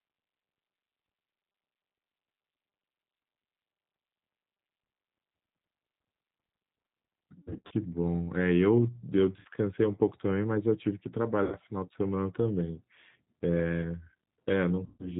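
From start to finish the speech carries plainly audible G.729 codec damage, consistent with an 8 kbit/s G.729A stream. Everything above 4 kHz is gone, and the voice sounds slightly rough and synthetic because the decoder rebuilds it from a vocal tract filter, a pitch predictor and a few pulses per frame. That buzzy, modelled grain is what separates it from simple band-limiting, which would leave the sound dull but natural.

Against that background come four bursts of VoIP packet loss concealed by the speech codec. The first, from 7.39 to 7.73 s, is the worst: about 220 ms of audio is missing, scattered over 320 ms, with the longest unbroken gap lasting 80 ms. Shorter bursts follow at 9.41 to 9.47 s (40 ms), 11.44 to 11.58 s (80 ms) and 14.86 to 15.08 s (140 ms).

In each burst the decoder fills the gap by extending its last pitch and filter while lowering the gain. The result is a stretched, buzzy tone or coloured noise that fades away, not a silent hole or a click. 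Because each frame depends on the previous one, the voice stays weak or smeared for a short time after the audio resumes, which sets this apart from a clean dropout.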